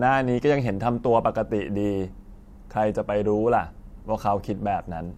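No technical faults can be heard in the recording.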